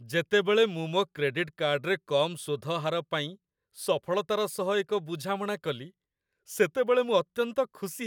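No technical faults can be heard anywhere in the speech, and the signal stays continuous and intact throughout.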